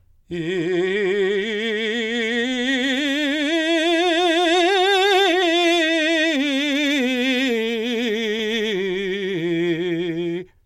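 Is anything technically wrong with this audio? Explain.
No, nothing technically wrong can be heard in this music.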